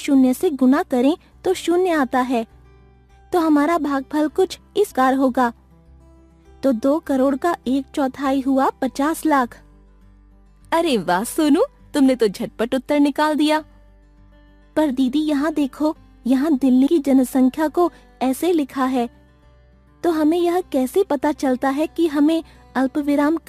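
Damaged data in a compressed stream interrupts the audio twice. Where the compressed data is corrupt, the decoder misreads the affected frames, loses its place in the bitstream and must hunt for the next valid frame header before clean playback resumes. Each event is heard as a very short chirp or blip: once from 4.90 to 4.92 s, and again at 16.86 s, where the disturbance lasts only about 12 ms.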